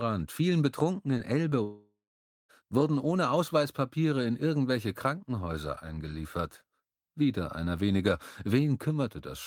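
At 1.17 s and again at 1.49 s, short concealed packet loss: about 20 ms of audio arrived too late, and the receiver patched each gap by extending the preceding sound, leaving a brief smear or wobble. From 1.63 s to 2.51 s, a long network dropout likely cut off delivery for roughly 0.86 s. The receiver carried the last sound forward as a fading buzz or hiss, then held about 0.52 s of silence before audio resumed with that stretch missing.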